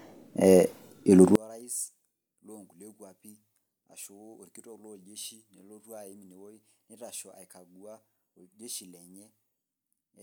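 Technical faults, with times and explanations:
1.35 to 10.22 s, one channel inverted: from 1.35 s to the end, the speech falls by about 30 dB when heard in mono, leaving a faint trace. The likely cause is one stereo channel with reversed polarity, so the shared centred content cancels when the channels are summed.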